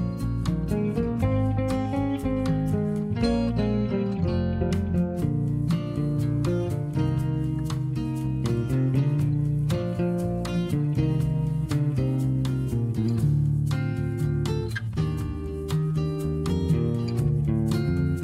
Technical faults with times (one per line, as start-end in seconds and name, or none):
none